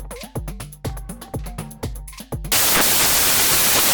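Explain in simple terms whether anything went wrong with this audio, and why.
Something did go wrong, starting at 2.52 s and lasting until the end of the clip. From that point the sound turns into loud, harsh noise, because of samples built from the wrong bytes. Each sample is stored as a few bytes, and here they were read back in the wrong order or out of step. The rapidly changing fine detail ended up treated as the main part of the signal, so it comes out as noise.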